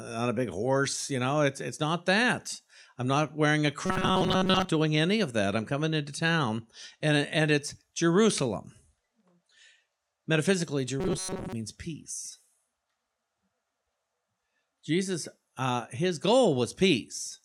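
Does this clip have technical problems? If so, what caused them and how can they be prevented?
Yes. Robotic sound from repeated short buffers occurs at 3.86 to 4.71 s and 11.00 to 11.53 s. The speech turns into a rigid metallic buzz at 188 Hz. This likely comes from audio arriving too seldom, so a roughly 5 ms buffer was replayed while most real audio was skipped. A larger jitter buffer or higher audio-thread priority prevents it.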